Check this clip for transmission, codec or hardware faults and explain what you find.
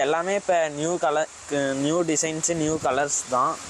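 Nothing wrong can be heard anywhere in the recording.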